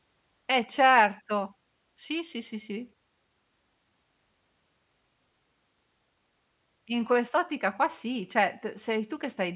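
No technical faults can be heard anywhere in the recording; the signal stays continuous and steady throughout.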